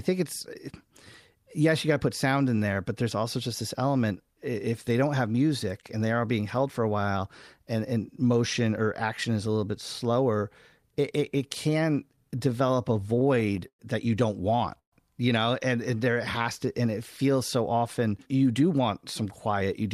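From 12.16 to 13.8 s the speech breaks into repeated stalls, a stutter. Packets kept arriving late, or slower than they were played. The jitter buffer ran dry 14 times. Each time, the receiver held the last sound going until data came back. Those fills add up to 249 ms, about 15% of the span. The longest lasts 112 ms. Nothing is lost. The speech just drags and jerks along.

At 14.79 s comes a call audio freeze lasting 0.14 s. The sound carries on briefly, then drops out. Of the 133 ms filled in, 110 ms is silence. Then the speech resumes where it stopped. The likely cause is packets held up in transit, which emptied the jitter buffer. The gap pushed the delay up by 133 ms. No speech is missing. A pause has been inserted.

From 15.91 to 16.67 s a jitter buffer slow-down sets in. The buffer was low, or had just raised its target delay. To rebuild a reserve, the receiver repeated single pitch periods or fragments of pauses, many times over. 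That added 58 ms. The speech runs at 93% speed. The pitch stays the same. Sounds come out drawn out and sluggish.

From 18.55 s to the end there is a jitter buffer speed-up. The buffer held more audio than it aims for. To cut the delay, the receiver kept removing short pieces one or a few pitch periods long. In total about a tenth of a second is gone. The speech runs at 107% speed with unchanged pitch. It sounds hurried.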